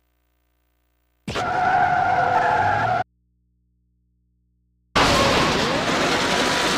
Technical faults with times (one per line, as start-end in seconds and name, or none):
3.02-4.95 audio dropout to a faint residue